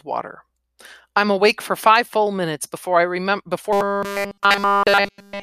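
Robotic sound from repeated short buffers runs from 3.73 s to the end of the speech clip at 5.42 s, right after "minutes before I remember". For that stretch the voice collapses into a rigid, metallic 200 Hz buzz that tracks the syllables only roughly, and essentially all of it is affected. The likely cause is audio arriving too late to play, with a fragment of about 5 ms looped in its place, which would set that fixed pitch.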